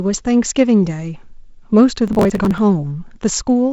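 From 2.08 to 2.58 s the speech breaks into processor overload crackle, a gritty tearing laid over the sound. The processor was falling behind its audio deadlines again and again, and each missed buffer was simply skipped, leaving a tiny hard-edged hole. The spacing suggests buffers of about 10 ms, with dozens missed in a row. Network dropouts would sound different: they leave longer, separate gaps, not a dense crackle that stops when the load eases. The band-limited wideband telephone sound, with nothing above about 7.7 kHz, fits G.722 at 48 kbit/s.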